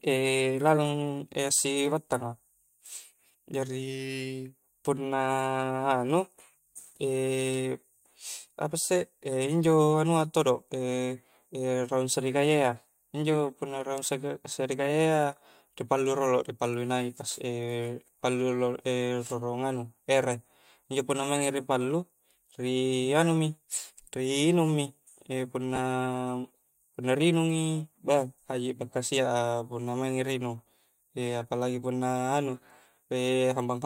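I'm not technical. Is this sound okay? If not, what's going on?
No. At about 25.76 to 25.79 s the speech briefly turns into a short fuzzy smear. These are lost LE Audio frames: the Bluetooth link dropped about 20 ms of sound, and the receiver patched the hole with a noisy copy of the last bit it heard. Unlike a plain dropout, it doesn't go silent or click; it blurs. The light compression is just doing its normal job.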